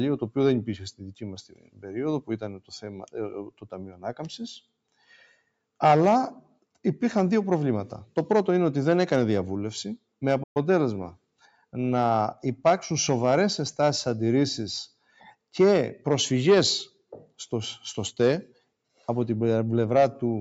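Throughout the clip a speech-oriented noise suppressor treats sustained and decaying content as noise, so the level swings by a few decibels as held material and tails are pulled down while attacks pass. The result is a pumping, thinning character.

Sound is cut by the noise suppressor at 0.92–1.21 s, 1.49–1.87 s, 2.53–3.15 s, 3.45–4.04 s and 4.92–5.38 s, with drops reaching about 16 to 19 dB. Each time steady sound sinks in level or its decay ends early.

At 10.43–10.57 s the audio drops out for 120 ms mid-flow and then resumes. This is likely a playback stall, with the player starved of data or blocked until it recovered.

Further suppressor cuts follow at 11.14–11.74 s, 14.89–15.36 s and 18.47–18.69 s, dipping by about 15 to 18 dB and clipping sustained portions in the same way.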